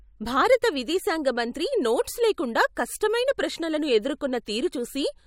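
Just after "విదేశాంగ మంత్రి నోట్స్ లేకుండా", a codec that never switches to short blocks smears noise ahead of attacks: pre-echo at 2.75 s and 3.00 s, a hiss about 13 to 14 dB up, blurring each onset.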